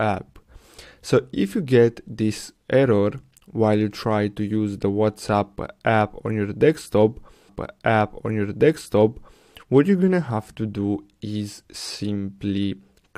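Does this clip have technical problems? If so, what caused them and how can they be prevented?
Yes. A stream segment repeated: the player queued the same segment twice, so about 2.0 s of sound replays from 7.48 to 9.48 s, after a blip at the jump back. Tracking segment sequence numbers and discarding duplicates prevents it.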